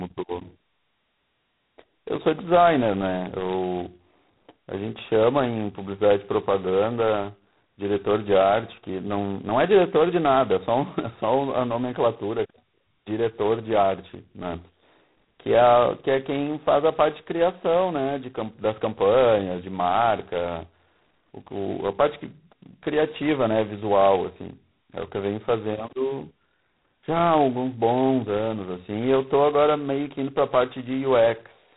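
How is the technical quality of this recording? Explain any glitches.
Technical quality is poor. Throughout, the speech carries a harsh, rasping hiss that rises and falls with its level, and nothing passes above 3.9 kHz. This is heavy G.726 ADPCM damage, most consistent with its lowest 16 kbit/s rate. At that rate each sample keeps only a coarse difference from an adaptive prediction, so the quantisation noise rides on the speech.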